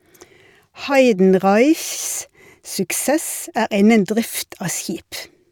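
Damaged compressed frames were decoded as if intact in this speech recording, a corrupt frame decoded fault. Misread data sends energy to wrong frequencies: a loud blip, peaking around -10 dBFS, at 0.92–0.94 s over a couple of frames, and a quieter burst near -20 dBFS at 5.16–5.24 s across a few frames.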